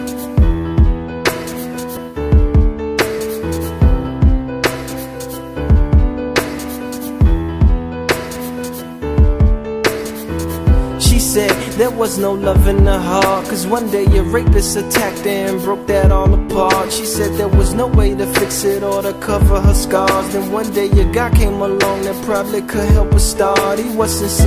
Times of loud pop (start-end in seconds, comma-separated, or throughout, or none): none